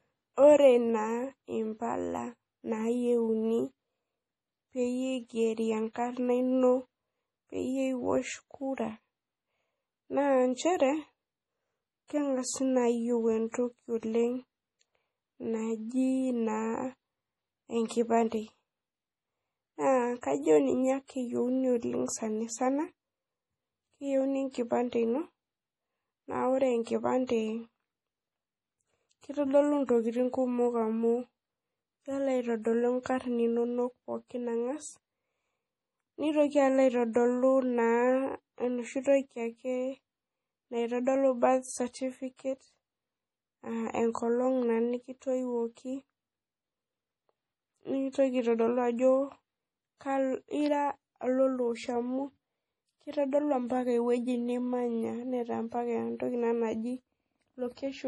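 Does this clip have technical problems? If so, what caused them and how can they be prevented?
Yes. Throughout the speech, everything above 11.5 kHz is missing and the sound is heavily watery and swirly. This is likely MP3 compression at a very low bitrate, somewhere around 32 kbps. Starved of bits, the encoder cuts the treble at a fixed frequency and drops quieter frequency components, which flicker in and out from one frame to the next. That gives metallic chirping on s sounds and smeared onsets. To prevent it, encode at a much higher bitrate or keep a lossless copy.

Pre-echo occurs from 13.52 to 13.54 s and again from 27.27 to 27.29 s, just after "na ore". Each time, the codec spread its quantisation noise across a whole block in which a sharp attack arrived late. Noise scaled for the loud onset therefore leaked into the quiet moment before it, so roughly 25 ms of hiss comes ahead of each attack and the attack itself sounds soft. 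To prevent it, use a higher bitrate or an encoder that switches to short blocks on transients.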